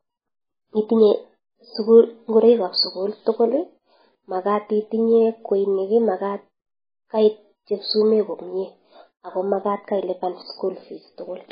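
Speech with MP3 compression damage throughout: nothing above 5 kHz, plus watery, swirling artefacts and metallic chirps on s sounds, likely from a very low-bitrate encode of roughly 16 kbps. A plain low-pass filter would dull the treble without this frame-to-frame warbling.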